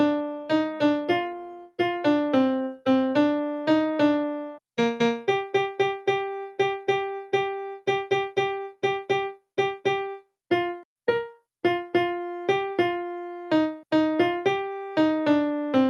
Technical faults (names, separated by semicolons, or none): sound cut by the noise suppressor